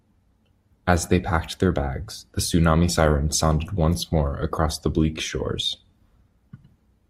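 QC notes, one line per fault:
2.88–7.10 s, adaptive stream at a lower bitrate: partway through the speech, quality steps down abruptly with no gap or dropout, and stays down to the end. There is more codec smearing, which fits the stream switching from roughly 64 kbit/s Opus to a 24 kbit/s rendition as the connection slowed. The waveform runs on unbroken through the switch at 2.88 s.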